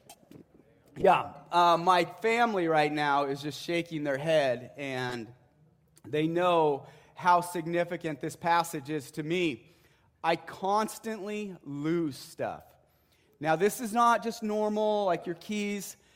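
At 1.00 to 1.05 s, and again at 5.09 to 5.15 s, a corrupt frame decoded breaks through as a short chirpy blip. Damaged bits in the compressed stream were decoded anyway, so misread gains and codes scattered energy into the wrong bands. The first spans a couple of frames and peaks near -20 dBFS; the second, a few frames long, reaches about -25 dBFS. A spectrogram shows brief rectangular patches of misplaced energy, and the waveform shows a small jagged burst.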